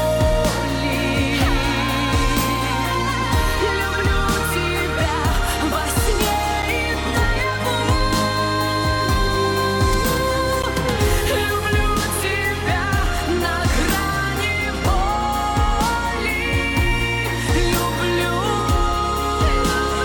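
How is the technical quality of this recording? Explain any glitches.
The recording has two brief glitches, both a block of digital silence, at 6.62 s (about 7.4 ms) and 10.62 s (about 11.6 ms, which fits a 512-sample buffer). Output samples went unfilled and dropped to zero. Unlike a faded dropout, each cuts hard, giving a tick.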